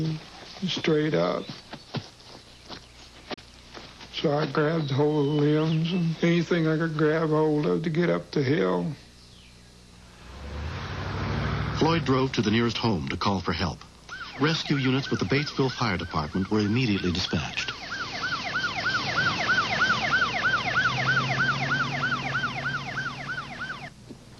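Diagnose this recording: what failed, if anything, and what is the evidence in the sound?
Digital broadcast dropout at the reception stage, 3.34 s. Sound fades over 8 ms, mutes for 32 ms, then returns. That fits one lost frame.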